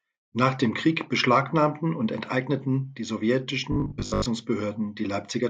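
From 3.72 to 4.26 s, the speech turns into robotic sound from repeated short buffers. It becomes a rigid, metallic buzz at 50 Hz. About half the audio is skipped. The likely cause is a 20 ms stretch replayed while fresh audio arrives too late.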